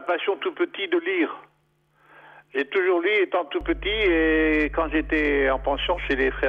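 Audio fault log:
3.61–6.48 s, mains hum: a ground loop or nearby transformer couples the 50 Hz power line into the signal, adding a steady low drone roughly 10 dB below the audio.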